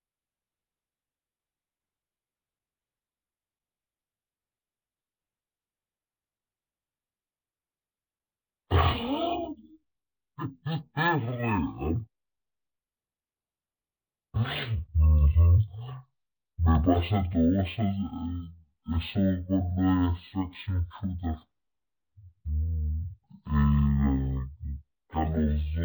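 Speech plays throughout at half speed and an octave low, the signature of stereo read as mono: interleaved left and right samples run as one channel. Unlike a plain sample-rate mismatch, a faint mirrored copy also sits in the upper spectrum.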